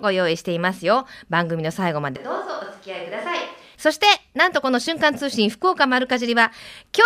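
From 2.16 to 3.75 s the speech suddenly turns roomy and thin, drops roughly 10 dB and gains more room noise: likely a switch to a distant microphone.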